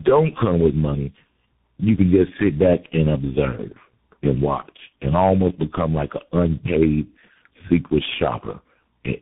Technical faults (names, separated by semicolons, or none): tandem speech coding